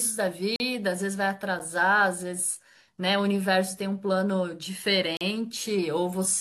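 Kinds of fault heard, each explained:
Block of digital silence: stretches of samples get swapped for zeros, so the speech cuts out and back with no fade. There are 40 ms holes at 0.56 s and 5.17 s, plus a brief tick of about 9 ms at 1.59 s.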